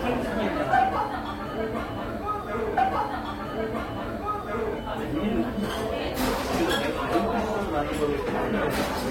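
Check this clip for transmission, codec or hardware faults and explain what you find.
One transmission fault. From 2.77 to 4.76 s, a stream segment repeated: the player queued the same segment twice, so two seconds of sound replay after a small blip. A whole stretch recurring, rather than a short looping fragment, marks it apart from buffer stutter.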